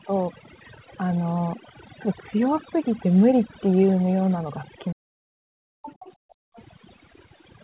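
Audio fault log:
Throughout: overdone noise removal. The background has been pushed to near silence, with faint twinkling specks where isolated frequency bands flicker on and off. The reducer was set too aggressively, so any band close to its noise estimate gets cut hard. The quieter parts of the speech fall into those bands and are removed as well. The audio is also band-limited to about 4 kHz, which is normal for a narrowband call path.
4.91–5.39 s: speech suppressed in double talk. For roughly half a second the speech sinks sharply, at its deepest by a large amount and close to inaudible. It then comes back as the span ends. The likely cause is that both ends of the call were talking at once. The echo canceller could not separate the local talker from the loudspeaker echo, so it attenuated everything reaching the microphone, the wanted speech included.
5.67–5.82 s and 6.14–6.56 s: background gated by the echo canceller. 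The room sound drops out twice, by about 40 dB at its deepest. The first drop is brief and the second lasts about 0.4 s. While far-end audio was playing from the loudspeaker, the canceller clamped the microphone path hard to keep echo out. Each time it released, the background returned.
5.82–6.13 s and 6.56–6.63 s: other side's voice leaking through. A second, fainter voice comes through in two scraps. The first sits well below the main talker and the second is quieter still and very short. This is likely loudspeaker playback of the far end that the echo canceller failed to fully subtract from the microphone signal. The leftover fragments slip out between its suppression actions, one immediately after each gated stretch.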